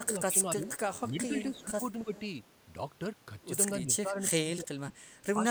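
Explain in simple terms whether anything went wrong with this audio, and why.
Yes, two things go wrong, and both are typical of a call where one side uses a loudspeaker.

The first is speech suppressed in double talk. The voice dips and drops out in patches from 0.0 to 0.64 s, 1.1 to 2.13 s, 3.83 to 4.94 s, and briefly at 5.36 to 5.43 s. The deepest cuts come in the third stretch, and the last one is slight. The likely cause is that both sides talked at once. The echo canceller could not tell the talker apart from the returning echo, so it turned everything down.

The second is echo leak. A faint, delayed copy of the voice comes back at 0.66 to 1.01 s, 1.54 to 1.62 s, 2.14 to 2.21 s, and 4.96 to 5.26 s. It trails the original by 287 ms. The last one is quieter than the others. This is likely sound from the far loudspeaker reaching the microphone there. That echo canceller failed to remove all of it, so some was sent back.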